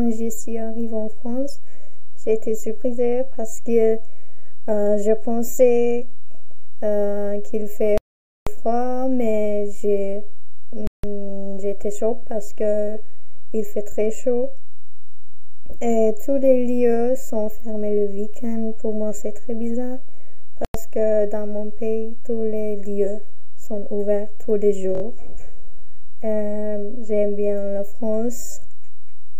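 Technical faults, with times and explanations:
7.98–8.47 s, 10.87–11.04 s and 20.65–20.75 s, Bluetooth stall: the sound drops to dead silence for 490 ms, then 163 ms, then 96 ms, and each time playback resumes. The likely cause is radio interference delaying packets on the wireless link, so the headphones' playback buffer empties and output halts until the resent data arrives. The clean gaps, with no repeated or garbled material, match that.
12.93–12.95 s and 24.95–25.02 s, repeated buffer: a piece about 23 ms long plays twice at 12.93 s and four times in a row at 24.95 s, with a hard join at each restart. When fresh audio was late, the device replayed its last block, which fits a 1024-sample buffer. Nothing appears skipped afterwards.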